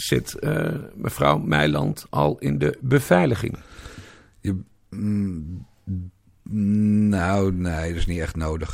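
Nothing in the recording trips any alarm, as there's no technical fault to point to anywhere along the way.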